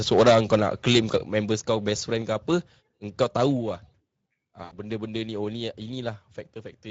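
Speech, with plainly audible Speex codec damage across the whole clip: a hoarse, grainy, noisy texture on every syllable, which fits a setting around 17 kbps. Unlike broadband hiss, this roughness rides on the speech itself and vanishes in the gaps between words. Microphone overload, likely from input volume set too high, puts a harsh crackling edge on the loudest syllables from 0.12 to 0.56 s (about 10 dB over, with roughly a tenth of samples flattened), from 0.87 to 1.16 s (also about 10 dB over, clipping less often) and briefly from 3.21 to 3.23 s (about 2 dB over). That distortion tracks the peaks, where the codec's grain is constant. The microphone volume is likely stepped down at 0.21 s (about 2 dB), 1.20 s (about 5 dB), 2.22 s (about 3 dB) and 4.26 s (about 4 dB). The voice and background drop together in a single instant and never creep back up, which sets these steps apart from a compressor's pumping. 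VoIP packet loss concealed by the speech codec appears from 4.63 to 4.78 s. It fits four lost 20 ms frames: the sound smears into a fading buzzy tone or coloured noise instead of clean silence, and it stays weak briefly after packets resume.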